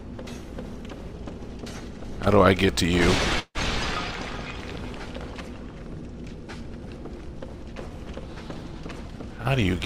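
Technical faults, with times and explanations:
3.39–3.58 s, call audio freeze: the sound smears into a fading buzz that ends in 50 ms of silence, about 155 ms filled in all, likely from late packets; resumes intact, spectrogram shows smeared bands then a blank strip.
9.08–9.80 s, jitter buffer speed-up: playback runs about 113% fast at unchanged pitch, roughly a tenth of a second trimmed in pitch-period pieces; waveform cycles keep their length, harmonics stay level.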